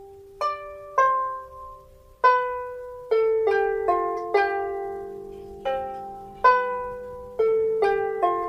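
No technical faults can be heard anywhere in this recording.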